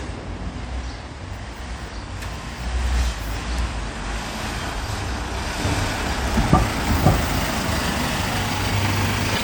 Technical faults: damaged data in a compressed stream

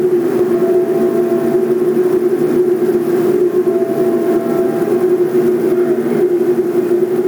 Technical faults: gain pumping

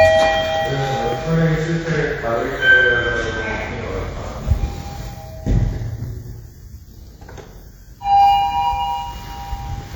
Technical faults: WMA compression

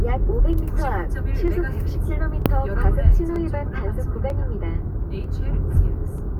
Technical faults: clock drift buffer slips

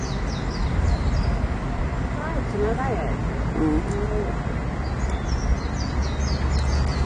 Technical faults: AAC compression

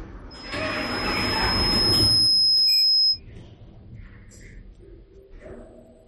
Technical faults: loudspeaker feedback squeal

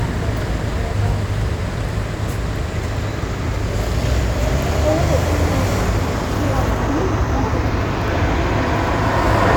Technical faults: none

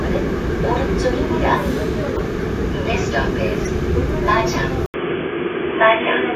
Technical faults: corrupt frame decoded; input switched to a poorer device

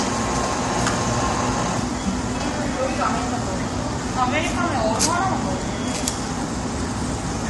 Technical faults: low-delay AAC compression

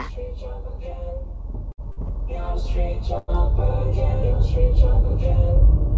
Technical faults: short stall from a late packet; call audio freeze

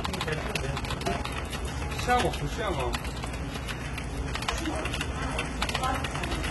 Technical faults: HE-AAC compression; overlap-add ripple

